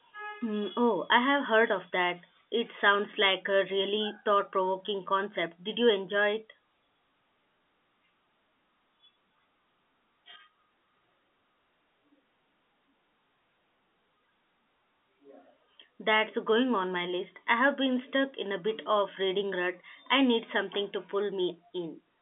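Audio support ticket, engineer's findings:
Findings: no faults found in this speech recording; the G.711 telephone coding path behaves as a standard narrowband line, with nothing above 3.8 kHz.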